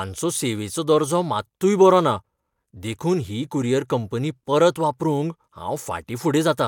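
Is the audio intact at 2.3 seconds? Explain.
Yes, the speech is intact at 2.3 seconds, with no dropout, click, distortion or other fault at that point.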